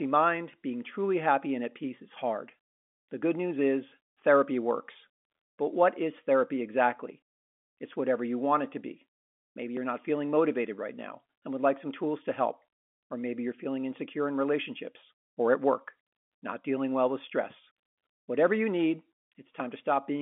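A small jump in the speech comes at 9.77 s, just before "not feeling motivated right", and again at 19.6 s, after "you need". Each is likely a dropped buffer (overrun): about 10 ms of samples was overwritten before being read, splicing the two sides together without any gap.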